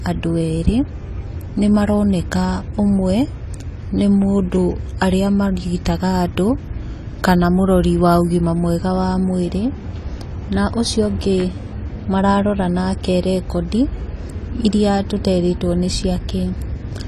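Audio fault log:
throughout — AAC compression: the speech sounds dull and smeared, with a warbling, fizzy edge on sibilants and held sounds, and nothing above 14.1 kHz. This fits coarse quantisation of the frequency lines and a lowered cut-off, likely from AAC-LC coding at around 32 kbps.
11.40 to 11.44 s — loud pop: a single sharp pop jumps out about 10 dB above the speech, which carries on underneath it. A sudden voltage pulse, likely from a plug, a switch or static, was added to the signal and briefly shaped by the circuits after it.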